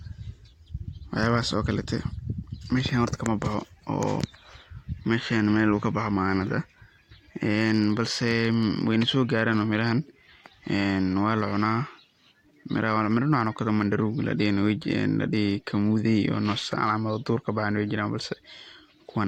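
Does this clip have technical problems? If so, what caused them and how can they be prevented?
No, this clip doesn't have technical problems, so there is no cause to explain or prevent.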